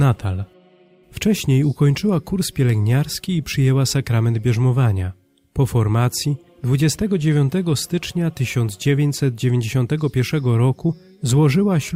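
No technical faults can be heard anywhere in the audio.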